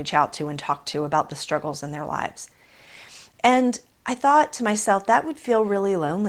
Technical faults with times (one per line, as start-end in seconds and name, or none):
none